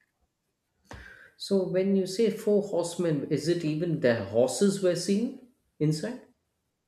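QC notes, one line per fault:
Nothing stood out on listening to the speech in this clip.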